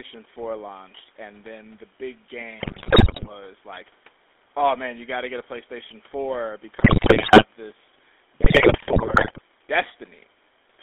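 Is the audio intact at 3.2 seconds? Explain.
No. GSM bit errors hit 2.6 to 3.29 s: corrupted filter, pitch and gain values distort each frame, so the speech squawks, pops and gargles. Underneath, the GSM full-rate codec runs throughout, its pulse-driven vocal-tract model adding a buzzy, gravelly roughness within a 300 Hz to 3.6 kHz band.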